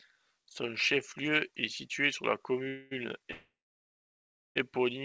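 Speech over a wideband call path with nothing above 8 kHz has two call audio freezes, at 2.68–2.93 s and 3.31–4.57 s. The second freeze fades into about a second of silence. The likely cause is late packets emptying the jitter buffer. Unlike packet loss, the speech resumes exactly where it stopped, only delayed.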